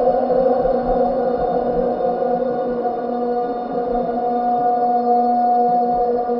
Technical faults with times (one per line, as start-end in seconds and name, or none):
none